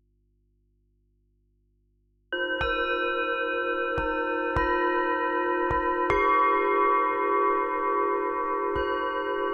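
From the very start until 2.32 s the clip is in an audio dropout to a faint residue. The wanted sound is absent and only a low mains hum remains, roughly 40 dB below the normal level, before the signal snaps back abruptly. The hum, rather than digital silence, is what separates this from a hard mute. It likely comes from a broken connection leaving an open, still-live input, and the sudden return rules out a fade or natural pause.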